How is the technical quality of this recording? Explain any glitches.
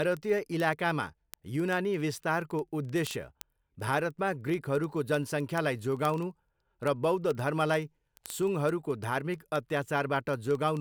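Technically it's let down by one steady problem: word clock ticks running through the speech from about 0.12 s to 10.77 s. Sharp ticks arrive roughly every 40 ms, a few hundred in all, some louder than others. The receiving device seems to be running on its own clock, off from the sender's by something like 500 ppm. Each time the two clocks slip a sample apart, a sample gets dropped or doubled and you hear a click.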